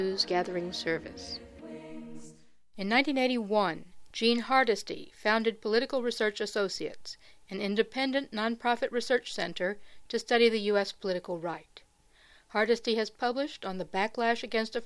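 No faults heard anywhere in the recording.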